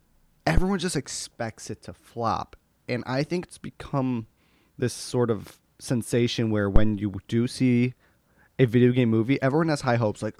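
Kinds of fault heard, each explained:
Phantom power thump: A supply voltage switching on a live input pushes a sudden step through the coupling capacitors. That step is heard as a deep thump. Here it happens twice. The first runs from 0.58 to 0.67 s, just before "just expects it to", peaking at about -6 dBFS and dying away in 20 ms. The second runs from 6.76 to 6.94 s, between "sort of sensation where" and "you do see", peaking at about -5 dBFS with a 41 ms decay.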